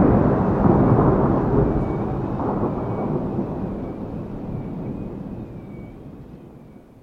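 At 3.91 s, compressed frames are skipped. About 200 ms of sound drops out, which fits roughly seven frames near 26 ms each. The overlapping frames leave a brief smeared blip at the join, not a click. The waveform and spectrogram show a sudden jump in content with a soft, blurred seam.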